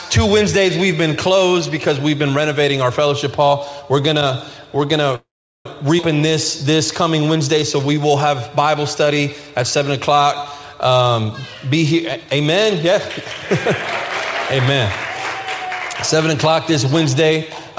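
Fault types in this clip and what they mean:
Call audio freeze: At 5.16 to 5.66 s the last sound stretches into a fading tail, then about 0.39 s of silence, likely from delayed packets; nothing is lost, unlike a skip.
Skip ahead: At 5.97 to 5.99 s playback jumps forward with almost no gap, dropping about a fifth of a second of audio, unlike a freeze, which inserts time.
Jitter buffer slow-down: From 6.18 to 9.48 s repeated pitch periods add 213 ms, so audio runs at 94% speed with unchanged pitch, unlike a freeze's single hold.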